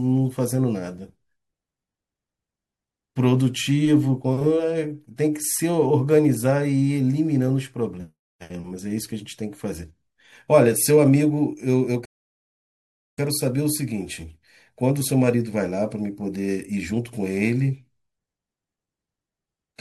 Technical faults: rebuffering stall

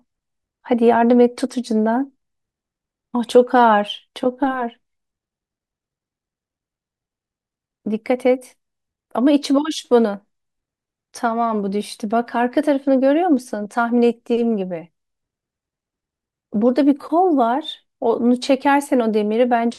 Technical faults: none

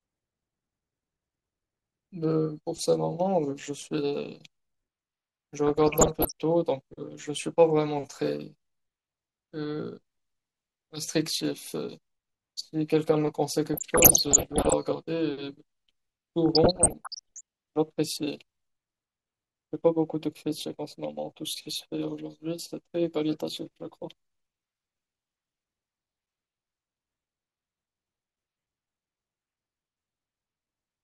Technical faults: DAB burbling

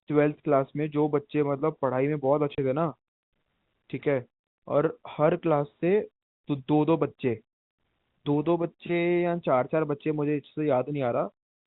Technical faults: packet loss filled with silence

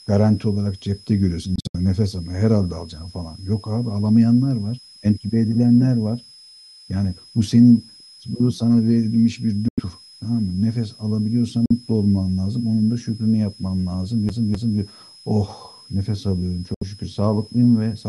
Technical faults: switching supply whistle; Bluetooth dropout; CD stuck on one turn

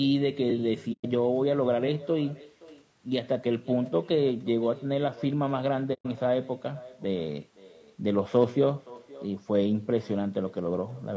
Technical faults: echo with no canceller; low-delay AAC compression; AAC frame loss with muting

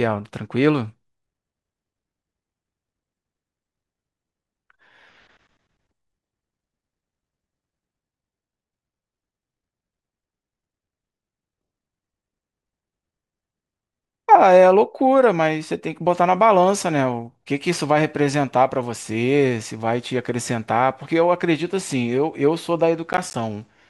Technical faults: processor overload crackle

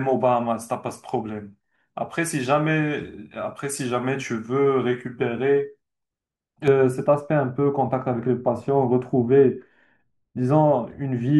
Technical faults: de-emphasis applied wrongly

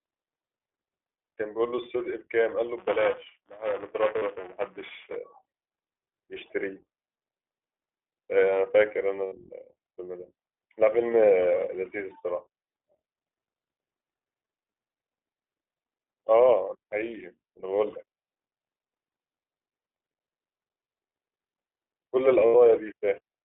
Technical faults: iLBC codec; lost iLBC frames

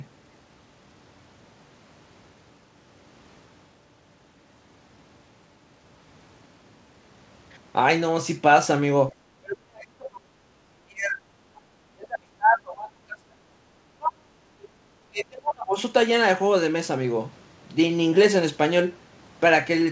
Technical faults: speech suppressed in double talk

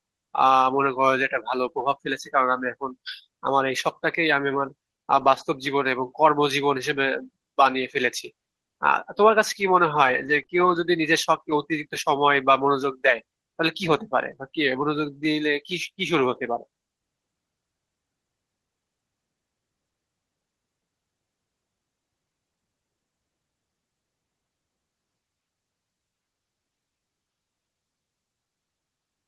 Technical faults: lost packet rebuilt from error correction; short concealed packet loss; scattered short gaps

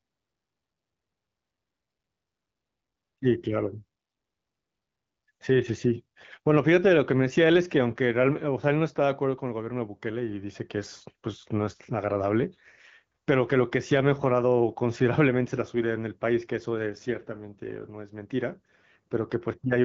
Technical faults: none

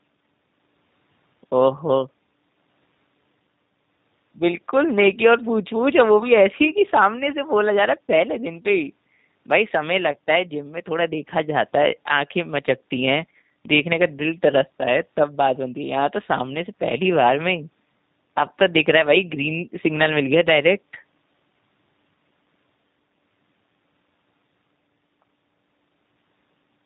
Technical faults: G.729 codec

